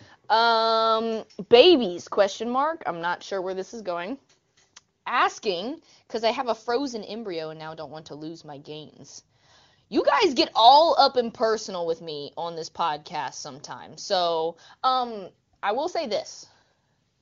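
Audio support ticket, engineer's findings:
No audible faults found.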